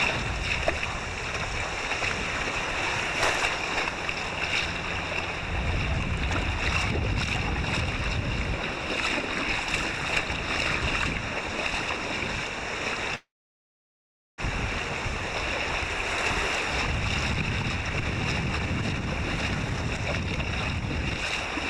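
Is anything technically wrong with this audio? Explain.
Yes, there are two timing faults.

From 13.15 to 14.40 s there is a call audio freeze. The sound briefly carries on as a fading buzz, then drops to silence for about 1.1 s, a likely sign that packets stalled and the jitter buffer ran dry. Playback resumes where it left off, so nothing is lost, but the 1.23 s gap pushes everything after it later. A waveform shows a short decaying tail and then a flat line. A spectrogram shows a smeared, fading band and then an empty column.

From 16.87 to 21.12 s there is a jitter buffer speed-up. The receiver had built up excess delay and trimmed it by cutting many tiny pitch-period slices, roughly 0.7 s in total. The audio plays at 116% speed with unchanged pitch and sounds rushed. On a spectrogram the events crowd closer together while the harmonic spacing stays the same. The waveform shows compressed timing.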